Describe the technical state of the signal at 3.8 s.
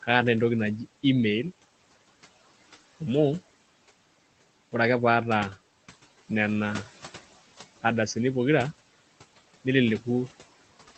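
At 3.8 s the speech carries noise suppressor artifacts, which run through the whole clip: the suppressor pulls the room noise down by about 16 dB in the gaps and lets it return under the speech. Unlike coding noise from the call path, whose top near 8 kHz fits a low-bitrate Opus link, this noise pumps with the speech rather than sitting as a steady grain.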